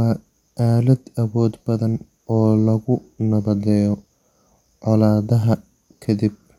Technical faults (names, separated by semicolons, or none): none